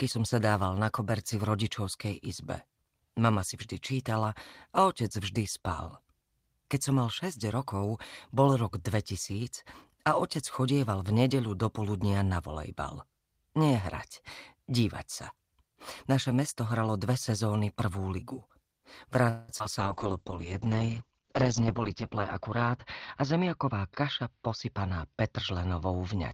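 Just past 19.29 s the call audio stops moving forward: the last sound is drawn out as a fading buzz-like tail for about 0.21 s, to 19.51 s, and then picks up exactly where it left off with nothing skipped. That is a call audio freeze, most likely from packets held up in transit so the jitter buffer ran dry and the receiver had to stretch what it already had, adding roughly 190 ms of delay. Immediately afterwards come two brief smears, at 19.59 to 19.62 s and 19.64 to 19.67 s, each a tiny wobble where 40 ms of real audio is gone and only about 10 ms of synthetic continuation covers the hole. These are short concealed packet losses: the packets did not reach the decoder in time, so the receiver extrapolated the preceding sound, blended back in, and in doing so trimmed off some of the delay built up by the freeze. From 19.79 s to the end of the clip the sound turns noticeably duller and rougher, with the top end gone and a coarse, watery texture. 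This is a call bitrate drop: the bandwidth estimate collapsed and the encoder went from 32 kbps down to 8 kbps, narrowing the audio band from 20 kHz to 8 kHz and sitting at its lowest rate for 2.41 s. Between 21.44 and 22.70 s the audio also runs hurried while keeping the same pitch, playing at about 107% speed. That is a jitter buffer speed-up: with more audio queued than the target, the receiver cut out small pitch-period slices over and over, removing around a tenth of a second to bring the latency back down.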